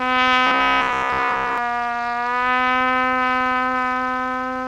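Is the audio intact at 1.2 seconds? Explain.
No. From 0.47 to 1.58 s there is robotic sound from repeated short buffers: a rigid, metallic 66.8 Hz buzz, likely from one roughly 15 ms stretch being replayed while most of the real audio is skipped. Throughout the clip, the filter restarted on every block starts each block from silence, producing a steady 200 Hz buzz of small transients whose strength follows the signal level.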